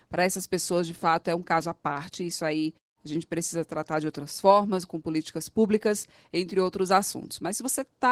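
Opus voice compression, throughout: coarse linear-prediction coding below 8 kHz with a thin layer above leaves the speech hoarse and slightly robotic, as at about 16 kbps.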